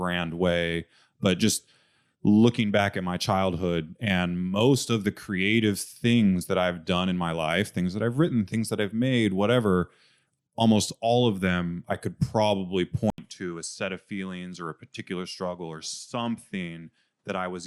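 At 13.1 s the speech drops out for 80 ms, then returns duller and noticeably quieter, with nothing above 11.4 kHz and a new, faint background noise, lasting to the end. The input likely switched to a poorer device mid-recording.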